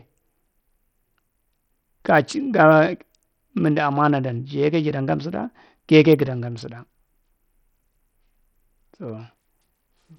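From start to finish the speech carries heavy damage that points to Bluetooth SBC compression as the likely cause, at a setting that fits a low bitrate around 64 kbps. Starved upper sub-bands leave the treble flickering in and out, while coarse quantisation adds a gritty, aliased haze over the whole sound. On a spectrogram, energy stops dead at 17.5 kHz, and the high bands below it appear as patchy, blocky strips.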